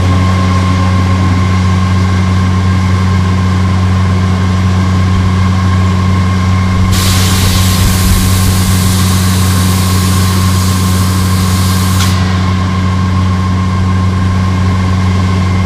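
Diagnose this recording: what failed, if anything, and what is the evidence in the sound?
Hard clipping throughout: the signal is driven about 6 dB past full scale at a converter or format stage, so roughly one percent of samples are cut flat, heard as crackle on peaks.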